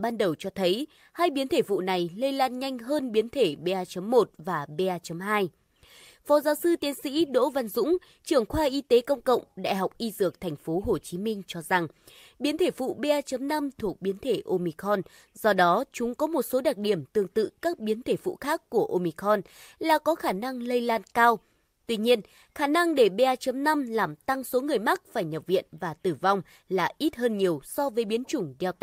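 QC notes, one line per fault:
No faults heard.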